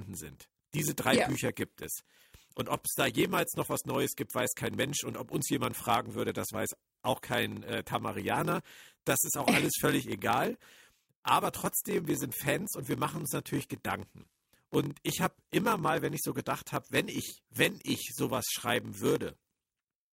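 A steady buzz near 43.1 Hz runs through the whole speech recording, which also plays slightly slow, at 0.938 times normal speed, with pitch roughly unchanged. This is a block size mismatch (padded): shorter written blocks, consistent with a 1024-sample read, are zero-filled, leaving a gap each block.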